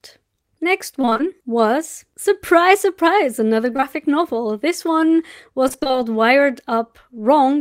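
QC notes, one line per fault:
1.01–1.21 s, repeated packet loss (robotic sound): choppy stutter. Five holes of up to 22 ms were patched by extending prior sound, about half the stretch concealed.
3.73–3.84 s, short concealed packet loss: a brief smear or wobble. Three back-to-back holes of about 20 ms each were filled by continuing the preceding sound, then blended back.
5.68–5.97 s, repeated packet loss (robotic sound): a longer choppy, broken-up patch. Seven gaps of up to 22 ms were bridged with continued sound, roughly half this span synthetic.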